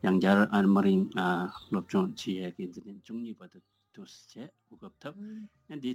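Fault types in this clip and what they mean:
zipper noise: From 2.03 to 2.91 s a fast ticking, zipping texture rides on the sound while its level falls by roughly 15 dB. The gain was moved in unsmoothed steps, around 200 a second, and each jump leaves a small click.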